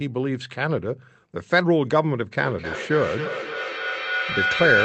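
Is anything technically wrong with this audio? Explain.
Yes. Feedback howl takes over from 2.37 s to the end of the clip. A microphone is picking up a nearby loudspeaker carrying the same call, so each trip around that loop returns louder than the last. Instead of dying away, the repeats pile up and narrow onto the frequency the loop favours, here around 1.5 kHz. The result is a rising whistle, from a loop that repeats roughly every third of a second, that peaks at about 2 dB below the speech level.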